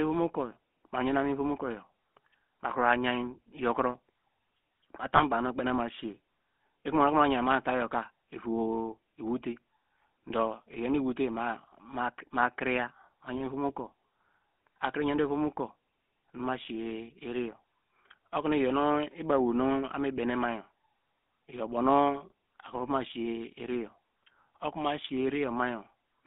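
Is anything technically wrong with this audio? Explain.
Yes, there are two related problems. The whole clip has gone through the GSM full-rate codec, and there's a short lost GSM frame glitch near the start.

Throughout, the speech sits in a narrow phone-line band of about 200 to 3500 Hz, so there's no low warmth and no air above 3.5 kHz. The damage is plainly audible. This codec models the vocal tract and then drives that model with a sparse train of regular pulses, keeping only every third sample of the excitation. That thinning is what gives voices the buzzy, gravelly edge you hear here. The overall character fits the old 13 kbps full-rate codec.

From 5.16 to 5.21 s there's a brief lost GSM frames event. When a frame arrives corrupted, the decoder reuses the parameters from the last good one, so for a moment the sound freezes into a short metallic, ringing smear. It's brief enough to point to a single dropped frame, so it's more of a rough blip than a dropout into silence.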